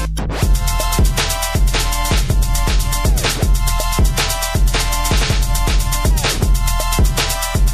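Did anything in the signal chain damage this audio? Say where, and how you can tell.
Yes. MP3 compression damage runs throughout, at the codec stage, and it is plainly audible: the sound is watery and swirly. That is likely from an MP3 encoder starved of bits, consistent with about 64 kbps, zeroing weak frequency lines between frames.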